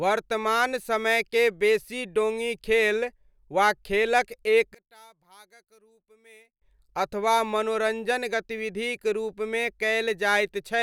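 After "खेलक एक", from 4.75 to 6.62 s, the speech drops by about 30 dB to a faint trace. This is likely one channel inverted, so the shared centre cancels when the channels are summed to mono.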